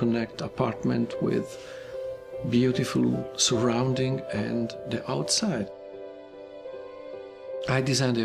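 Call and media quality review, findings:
No audible faults found; no dropouts, level anomalies or timing errors to attribute to any component.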